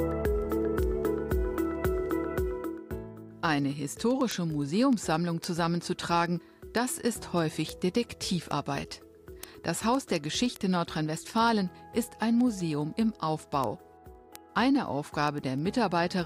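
From 0.11 s to 16.2 s there's a steady run of word clock ticks, sharp clicks of uneven strength at about ten a second. The receiver isn't locked to the sender's clock and drifts by something like 200 ppm, so each slip drops or repeats one sample.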